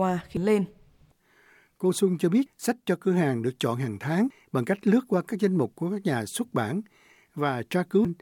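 At 0.37 to 0.40 s and again at 8.05 to 8.08 s, damaged data in the compressed stream corrupts the frames there. The decoder misreads them and loses sync while hunting for the next valid frame header, producing a short blip in the speech lasting about 30 ms each time.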